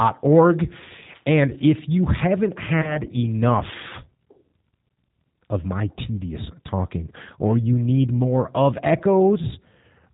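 Throughout, the speech carries plainly audible G.729 codec damage. It sounds like the G.729A variant, which fits 8 kbit/s. Speech is rebuilt from a vocal tract filter, a pitch predictor and a few pulses per frame. Nothing above 4 kHz survives. The result is thin, rough and slightly synthetic.

From 2.82 to 2.99 s, just after "you haven't", VoIP packet loss is concealed by the speech codec. The gap points to a single lost packet of about 20 ms. The decoder extends its last pitch and filter at falling gain, stretching the sound into a buzzy tone or coloured noise that fades. Recovery lags, so the sound stays weak or distorted until 2.99 s.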